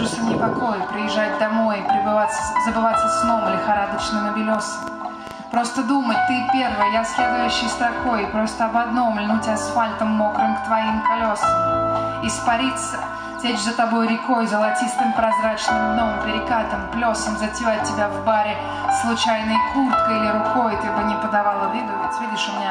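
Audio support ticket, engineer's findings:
Train of clicks, 4.55 to 5.77 s. Around ten popping ticks at about 6.6 per second, irregularly spaced, similar shape, peaking a few dB above the surrounding sound. Probable component: likely external interference, a faulty connection or a power supply, each injecting repeated pulses into the signal path.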